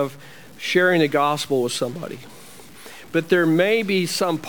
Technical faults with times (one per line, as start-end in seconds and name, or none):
0.00-4.49 stuck bit